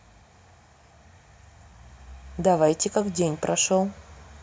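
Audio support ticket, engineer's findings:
No audible faults found.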